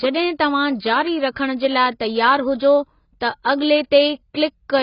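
Speech throughout carries heavy AAC compression artefacts, likely from AAC-LC at a low bitrate of around 16 kbps. Nothing is present above 5.1 kHz, so the sound is dull, and the coarse spectral quantisation leaves a smeared, warbling texture on sustained sounds and sibilants.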